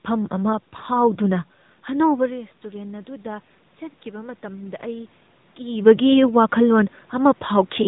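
Speech carried through the AMR narrowband mobile codec the whole way: the band stops near 3.8 kHz, and the plainly buzzy, synthetic edge fits a mid AMR-NB rate around 10 kbps. From 4.03 to 6.05 s, automatic gain rising follows an input drop of about 15 dB; the gain climbs about 3 dB, so voice and background swell together gradually.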